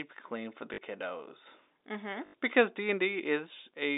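A brief robotic stutter sounds at 0.74 to 0.78 s, just after "clean for the", and a longer 50 Hz buzz at 2.26 to 2.34 s. Both are packet loss with last packet repeated, fitting 20 ms packets, under the narrow telephone band.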